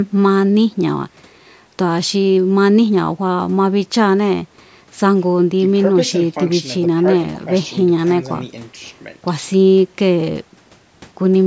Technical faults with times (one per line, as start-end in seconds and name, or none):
none